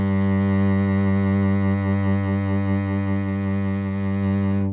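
Nothing goes wrong anywhere in this bit of music; there's simply no technical fault to point out.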